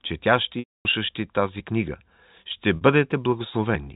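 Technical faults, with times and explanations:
0.59–0.85 s, packet loss with pitch repetition: the sound freezes into a buzzy, repeated tone that fades to silence, then resumes with a short cross-fade. About 260 ms went missing, which points to a run of lost 10 ms packets. The receiver looped the last pitch period to bridge the gap and faded it out.
2.76–2.81 s, packet loss with pitch repetition: a brief, slightly held buzzy note where the sound should keep moving. Only about 50 ms was lost here, so the receiver's repeated last pitch period covers the whole gap before normal audio returns, with no silence.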